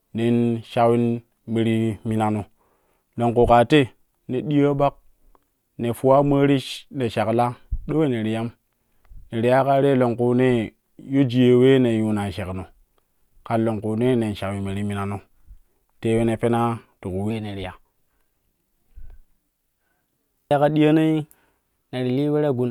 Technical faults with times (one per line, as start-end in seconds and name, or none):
0.00-17.30 wrong sample rate